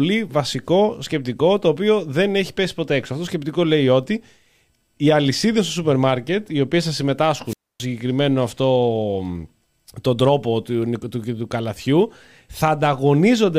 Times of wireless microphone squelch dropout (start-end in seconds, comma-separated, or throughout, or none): 7.46-7.85